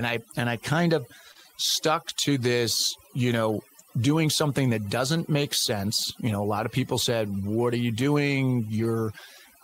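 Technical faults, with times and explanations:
Throughout, overdone noise removal: a noise reducer set too strong pulls individual frequency bands down or off wherever they sit near its noise estimate. The background drops and breaks up into twinkling specks, and quieter parts of the speech go too.
1.31–1.37 s, short concealed packet loss: right after "and I kind of", about 40 ms of audio failed to reach the decoder in time. The receiver extended the preceding sound for roughly 36 ms and blended back in, which is heard as a brief smear or wobble.
1.35–1.45 s and 8.83–8.85 s, lost packets rebuilt from error correction: the first stretch, overlapping the concealment above, is 60 ms of rebuilt audio, which fits three lost packets. The second is a single 20 ms frame. Both were replaced by low-bitrate copies carried in the following packets, so there is no gap, but those moments sound rougher and noisier.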